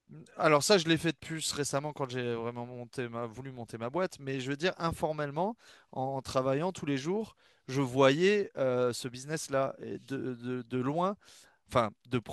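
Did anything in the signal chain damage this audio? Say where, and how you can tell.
No, nothing in the signal chain has audibly damaged this speech recording. No stage between capture and playback leaves a mark that can be heard anywhere in the clip.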